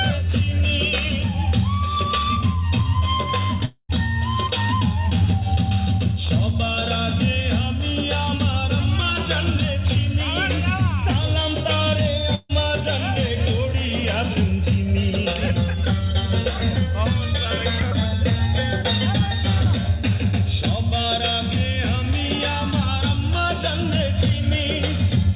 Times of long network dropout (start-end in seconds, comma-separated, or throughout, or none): 3.65-3.92